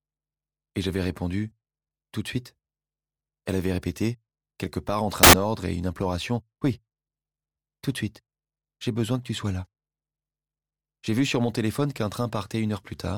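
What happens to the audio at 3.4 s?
Nothing goes wrong at 3.4 s; the audio plays through that moment intact, with no dropout, click or distortion.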